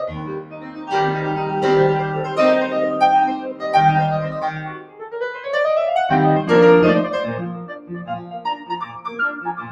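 A speech-tuned noise suppressor sits on this music the whole way, treating held tones and tails as noise, so the level pumps by roughly 10 dB. It clamps down hard at 0.4–0.9 s, 3.37–3.64 s and 4.55–5.46 s, each dipping about 12 dB, then lighter at 7.59–7.9 s, about 7 dB, sinking sustains while attacks slip through.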